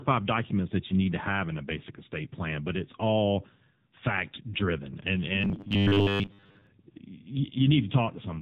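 AMR narrowband mobile codec, throughout: the speech is squeezed through a low-rate vocal-tract model, which fits a bitrate around 6.7 kbps, so the voice sounds buzzy and synthetic, with heavy coding damage and nothing above 4 kHz, leaving a dull, band-limited telephone tone.

Robotic sound from repeated short buffers, from 5.41 to 6.67 s: the voice turns into a rigid metallic buzz at 100 Hz, which points to a 10 ms stretch being replayed while roughly two thirds or more of the real audio is skipped, likely because new audio arrived too seldom.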